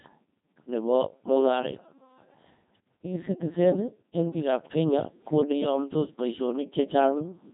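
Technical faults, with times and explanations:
Throughout, Codec 2 vocoder: the speech is resynthesised from sine waves, so it sounds heavily robotic and buzzy, consistent with a 2.4 kbit/s mode. The spectrogram shows nothing above 3.8 kHz.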